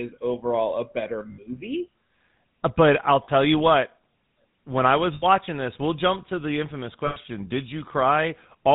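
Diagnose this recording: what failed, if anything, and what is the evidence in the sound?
The speech went through the GSM full-rate codec, which fits a 13 kbps stream. It rebuilds each segment from a vocal-tract model driven by evenly spaced pulses using only every third excitation sample. Nothing passes above 4 kHz, leaving a plainly audible buzzy, gravelly roughness.

Lost GSM frames in transmission were concealed by replaying the last good frame, freezing the sound into a rough metallic ring. This happens for 60 ms at 1.32 s after "overall a better", 40 ms at 3.24 s between "but I'll" and "you what", 80 ms at 5.14 s, and 100 ms at 7.06 s after "jump to the infamous".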